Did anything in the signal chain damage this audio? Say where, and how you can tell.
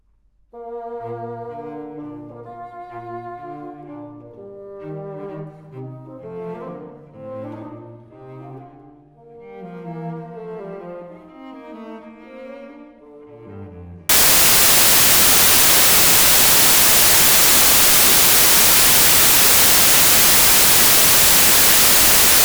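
Yes. From 14.09 s to the end at 22.45 s the sound collapses into loud, hissing white noise. That points to the sample-format conversion stage: samples built from the wrong bytes. The reader is assembling each sample out of misordered or misaligned bytes, so the rapidly changing low-order bits land in the most significant position and dominate every value.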